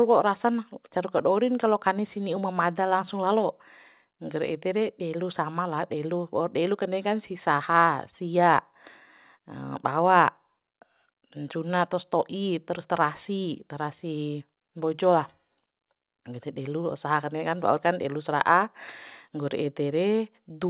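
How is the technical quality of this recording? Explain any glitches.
No glitches to speak of here, just speech that came through an ordinary call connection with nothing above 4 kHz, which fits a G.711 mu-law phone codec at 64 kbps.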